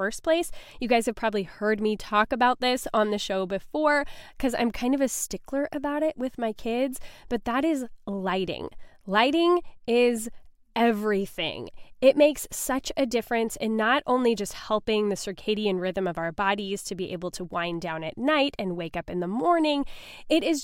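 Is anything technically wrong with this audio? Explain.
No, nothing in this speech recording stands out as a technical problem; it all sounds just as it should.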